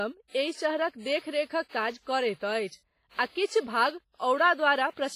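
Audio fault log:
Throughout, WMA compression. The speech sounds ringing and washy, with a hiss that swells and fades with the signal. Nothing is heard above 15.5 kHz. The heavy damage likely comes from a low-bitrate transform codec, consistent with about 24 kbps.
3.64 to 3.67 s, pre-echo. A hiss lasting 33 ms arrives just before a sharp attack, which sounds soft and smeared. The codec spread its quantisation noise across the whole block, so noise sized for the loud onset filled the quiet gap before it.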